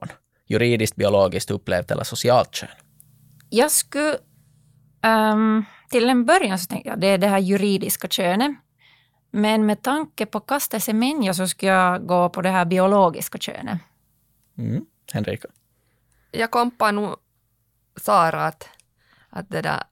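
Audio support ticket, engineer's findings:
No audible faults found on review; no action required.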